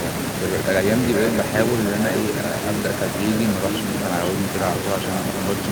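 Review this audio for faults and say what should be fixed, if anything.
Echo with no canceller runs through the whole recording: every phrase returns about half a second later, about 7 dB quieter and thinner, because the far end's loudspeaker feeds its microphone back into the call. On a spectrogram each syllable has a fainter, smeared duplicate trailing it; the waveform shows ghost envelopes after each burst. Enabling acoustic echo cancellation, or having the far end use a headset, would prevent it.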